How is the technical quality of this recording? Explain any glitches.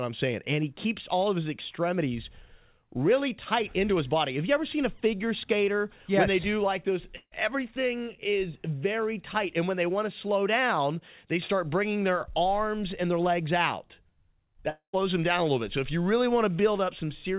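Two short gaps break up the audio, at 7.16 to 7.34 s and 14.70 to 14.95 s. The band stops at 4 kHz, which fits a G.711 mu-law call path.

Both look like a long network dropout. Audio stops arriving and the receiver stretches the last sound into a fading buzz or hiss, about 155 ms the first time and 237 ms the second, then drops to silence for a moment before the sound resumes with the missing part simply gone. Lost packets are the likely cause.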